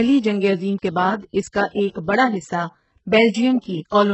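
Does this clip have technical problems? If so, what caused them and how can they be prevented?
Yes: HE-AAC compression, likely, throughout, heavy damage, nothing above 8 kHz, treble rebuilt from copied lower bands, so s sounds go gritty. Fix: encode at higher bitrate.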